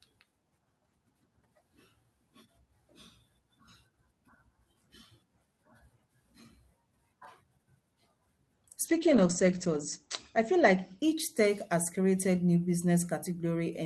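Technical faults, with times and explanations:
8.88–13.47 s, call bitrate drop: the speech turns rough and muffled, losing its top end above 8 kHz (down from 20 kHz), worst for about 1 s. This fits the encoder being told to fall from roughly 64 kbps to 11 kbps.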